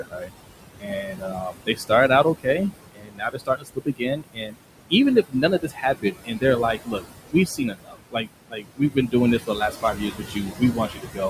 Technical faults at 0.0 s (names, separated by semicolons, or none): noise suppressor artifacts; speech cut by the noise suppressor